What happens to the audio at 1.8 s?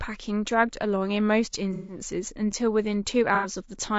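Around 1.8 s the sound turns smeared and noisy between 1.73 and 1.99 s. This is AAC frame loss with concealment: the decoder rebuilt missing frames from the last good spectrum. The gap fits about five lost frames, roughly 150 ms.

Underneath, the sound is rough and grainy, with noise between harmonics and a synthetic-sounding top band. That likely comes from low-delay AAC compression (AAC-ELD), coded with a low-delay window. The plainly audible damage points to a low bitrate around 32 kbps.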